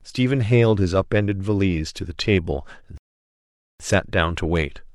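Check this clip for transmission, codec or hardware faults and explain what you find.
There is one fault, a rebuffering stall. At 2.98 s the speech cuts to silence until 3.8 s, adding about 0.82 s to the clip. The player ran out of downloaded audio and had to wait for more to arrive, so playback simply paused and then picked up exactly where it left off. No speech is missing. On a waveform this is a flat gap of silence, and on a spectrogram an empty vertical band, with the signal continuing seamlessly on either side.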